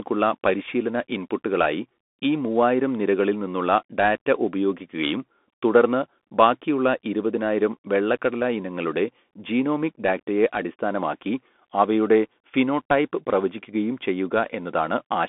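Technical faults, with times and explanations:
Throughout, Bluetooth CVSD headset codec: the speech is confined to 200 Hz to 3.5 kHz. One-bit up/down steps lag fast changes, so s sounds turn scratchy over a granular hiss, which fits a 64 kbps CVSD link. A spectrogram shows a hard ceiling at 3.5 kHz, and the waveform looks jagged.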